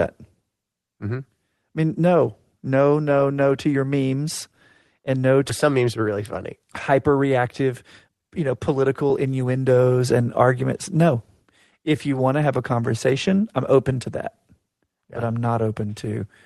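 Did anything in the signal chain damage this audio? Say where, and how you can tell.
Yes. At 5.49 s there is a skip ahead at the network and jitter buffer stage. A stretch of roughly 0.7 s of speech was dropped while later audio was already queued, and playback jumps straight to the later material with no silence or fill in between. On a waveform the envelope changes abruptly at a single point. On a spectrogram the formant tracks break and restart mid-pattern, with no gap between them.

The jitter buffer speed-up follows at the same stage, running from 5.65 to 7.68 s at about 108% and from 8.08 to 9.59 s at about 109%. Each stretch loses around 150 ms as the receiver trims short pitch-period pieces to shrink an overfull buffer. The speech sounds hurried, but the pitch holds. On a spectrogram the harmonic spacing stays constant while the syllables are compressed in time. The waveform shows periodic cycles quietly spliced out.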